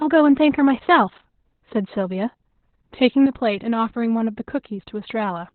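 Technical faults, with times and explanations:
Throughout, Opus voice compression: the speech sounds heavily muffled, hoarse and slightly robotic because the SILK coder runs narrowband and codes the excitation coarsely, which fits a bitrate near 8 kbps. On a spectrogram there is a flat ceiling at 4.2 kHz, with nothing above it.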